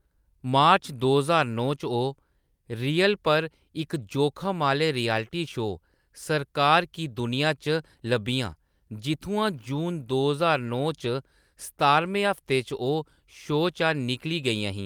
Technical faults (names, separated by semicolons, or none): none